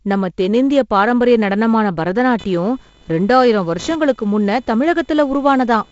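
Computer activity noise starts at 2.39 s, just after "தென்னிந்திய பாரம்பரிய நடனமான", and lasts to the end. Load changes in the computer are shifting the audio circuit's shared ground, adding a buzzy pulsing near 500 Hz, roughly 30 dB below the speech, that follows the machine's activity rather than the speech.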